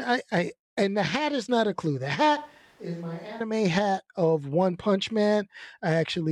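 At 2.37 s the speech abruptly becomes roomy and hollow, with thinner low end, a level drop of roughly 10 dB and audible background noise sitting around 25 dB below the speech. At 3.40 s it snaps back just as suddenly. The likely cause is a switch to a distant microphone: the close microphone's feed dropped out or was skipped for about a second, so the recording carried a pickup farther from the talker, capturing more room reflection and ambient noise.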